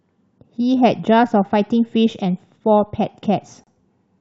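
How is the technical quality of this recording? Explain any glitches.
The recording has one audible glitch, a gap at a join of encoded pieces. From 3.64 to 3.67 s the speech drops out for 31 ms. The audio was likely encoded in pieces of about 4 s and butted together untrimmed, so encoder start delay and final-frame padding leave silence. It sounds like a brief break before the speech carries on from where it stopped. On a waveform it appears as a flat notch, and on a spectrogram as a thin, nearly empty vertical stripe with slightly smeared edges.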